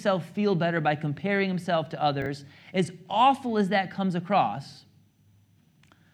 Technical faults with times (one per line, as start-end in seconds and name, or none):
2.22-2.26 chunks out of order
5.28-5.36 chunks out of order